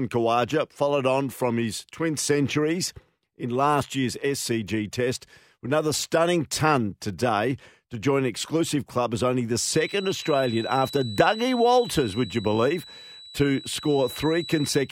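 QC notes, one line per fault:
9.53–14.92 s, feedback whistle: The loudspeaker-to-microphone loop is likely sitting right at the edge of feedback, where the gain around the loop comes close to unity at a single frequency. That frequency keeps circulating without building into a howl, so a thin, steady tone near 3.9 kHz rides under the speech, roughly 15 dB below it. It holds through to the end of the clip, swelling and fading slowly in level as the loop gain shifts.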